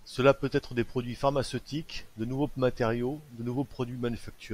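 A speech recording, with nothing technically wrong with it.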